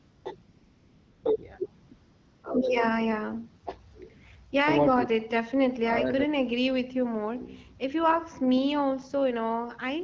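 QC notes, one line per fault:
0.00–0.25 s, 0.43–1.23 s, 1.87–1.91 s, 1.93–2.43 s: AMR comfort noise. The phone stopped sending frames during pauses, and the receiver synthesised a smooth, steady hiss in place of the real background. Unlike a noise gate, the gaps hold even noise rather than silence, and it switches in and out.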